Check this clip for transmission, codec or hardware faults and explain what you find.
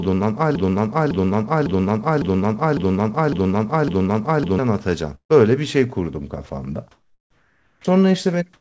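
Several transmission faults are audible across the call audio, which has nothing above 8 kHz, as expected from a G.722 path.

Broken-record loop, 0 to 4.59 s: a 0.55 s fragment repeats seven times back to back, already under way at the start. The stream likely stalled and resent its last fragment.

Burst of packet loss, 5.15 to 5.32 s: the sound is stretched, then fades to near silence for about 100 ms. About 150 ms of packets went missing and concealment filled the gap.

Sound dropped by the voice detector, 6.46 to 6.49 s: 30 ms of speech briefly turns into steady noise, likely because the detector mistook it for background and stopped sending.

Comfort noise in place of the background, 6.91 to 7.84 s: the background turns into flat, featureless hiss about 7 dB quieter, likely synthetic noise filling a pause in transmission.

Onset clipped by the voice detector, 7.79 to 7.84 s and 8.58 to 8.61 s: speech begins abruptly without its soft start. 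The detector likely reacted late, losing 50 ms and 30 ms.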